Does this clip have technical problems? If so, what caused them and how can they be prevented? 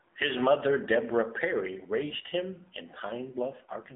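Yes. AMR narrowband mobile codec damage runs throughout the speech. The audio has been squeezed into a phone-line band of roughly 200 Hz to 3.6 kHz, with nothing above 3.8 kHz, so the voice sounds thin and muffled. The codec rebuilds speech from a vocal-tract model excited by a few pulses per short subframe, and the plainly audible buzzy, synthetic edge fits a low mode around 7.4 kbps. To prevent it, record or transmit over a wideband path, or at a higher AMR rate, rather than a narrowband mobile link.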